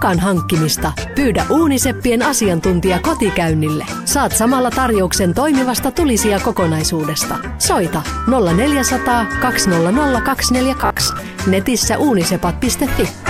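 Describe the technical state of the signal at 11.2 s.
At 11.2 s the sound is just leaving a stretch of robotic sound from repeated short buffers that runs from 10.81 to 11.19 s. Through that span it becomes a rigid, metallic buzz near 67 Hz that only loosely follows the underlying audio. The likely cause is a buffer underrun: new audio arrived too slowly, so playback looped the last 15 ms or so for roughly half the span while real material was skipped, imposing that fixed pitch.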